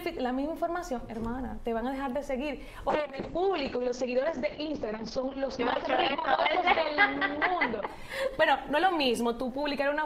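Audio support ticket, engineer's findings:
Call bitrate drop from 2.95 s to the end. Top end cut at 8 kHz, down from 20 kHz. Coarse, watery texture, worst for about 3.6 s. Encoder starved of bits. Quality fits a fall from roughly 128 to 7 kbps. No recovery heard.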